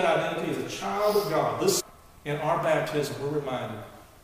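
A stream segment skipped at 1.79 to 1.81 s: the sound jumps abruptly forward, with a short blip lasting about 20 ms at the join where the flow breaks and resumes at a different point. The likely cause is a segmented stream in which one segment failed to arrive or decode, so the player discarded it and continued with the next, leaving a gap in the material itself rather than a pause in playback.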